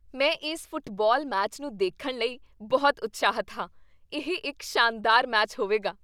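Listening to the speech recording, nothing technical stood out.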